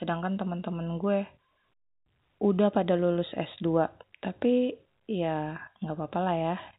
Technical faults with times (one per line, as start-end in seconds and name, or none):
none